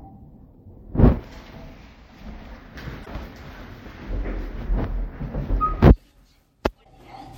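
Damaged data in a compressed stream appears twice, from 3.02 to 3.08 s and from 6.81 to 6.86 s. Each time, corrupted bytes make the decoder misread frames and lose sync until it finds a valid header, producing a brief glitch of about 50 ms.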